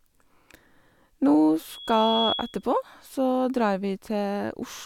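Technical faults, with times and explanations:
1.70–2.64 s, loudspeaker feedback squeal: a single tone at about 3.3 kHz rises out of the speech. It swells over roughly half a second and then holds at about the same loudness as the speech until 2.64 s. The microphone is picking up the loudspeaker it feeds, and at that one frequency the loop gain goes above one, so the tone keeps feeding itself. On a spectrogram it shows as a bright horizontal line at 3.3 kHz that thickens as it builds. The waveform envelope swells with it.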